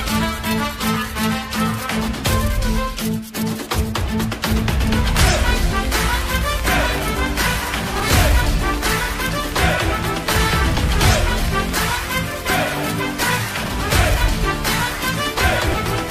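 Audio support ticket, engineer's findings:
Train of clicks, 5.22 to 11.70 s. Likely external interference from nearby equipment or a faulty connection or power supply injecting pulses. Near-identical impulses at around 11 per second, irregular spacing, roughly 70 in total, peaks about 10 dB above programme level. Audible as uneven ticking and popping laid over the audio, continuing through pauses.

Chunks out of order, 7.96 to 8.02 s. A 20 ms block delivered or written two blocks late, then played after its successors. No audio lost, but three hard joins. Brief jumbled stutter.

Chunks out of order, 13.66 to 13.70 s. One 20 ms block one position late. Shorter scramble.

Chunks out of order, 15.68 to 15.74 s. A 20 ms block two positions late. Same garbled blip.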